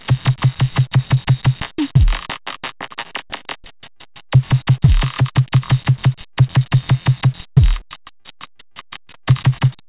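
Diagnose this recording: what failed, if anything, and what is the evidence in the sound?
Repeated packet loss (robotic sound) hit the network leg of the call twice. From 3.80 to 4.38 s, five gaps lost about 120 ms of audio, the longest 39 ms. From 8.05 to 9.29 s, twelve gaps lost about 260 ms, the longest 53 ms. In each stretch the receiver had to invent roughly 18% of the sound by stretching whatever came just before each hole. The patches arrive too close together to blend, so the sound turns choppy, with pieces missing.

A single short concealed packet loss falls at 6.33 to 6.39 s, where about 40 ms never reached the decoder in time. The decoder filled it by carrying the preceding sound forward and then crossfading back into the real audio, which leaves a brief smear or wobble rather than a clean gap. The call codec's band limit is audible throughout, with nothing above 4 kHz, consistent with G.711 A-law.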